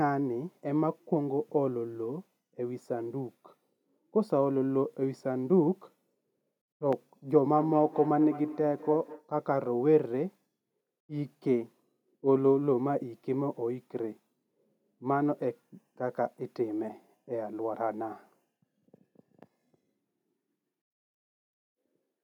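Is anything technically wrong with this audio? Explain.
Yes. From 7.52 to 9.31 s there is feedback echo between two devices. A second device replays this microphone's sound, which returns roughly every fifth of a second, thinner each pass, peaking about 13 dB below the speech.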